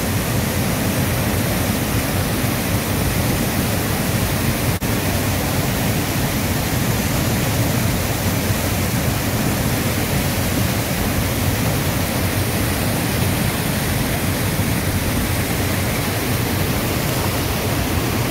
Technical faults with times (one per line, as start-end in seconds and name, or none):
0.00-18.30 sample clock jitter